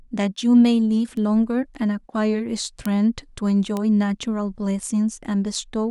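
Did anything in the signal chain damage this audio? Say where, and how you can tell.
Yes: bit error spikes from a flipped bit in storage or on a digital link. One- or two-sample ticks at 1.17, 2.86 and 3.77 s (peaking about −24, −6 and −12 dBFS) appear as isolated waveform needles and full-height spectrogram lines.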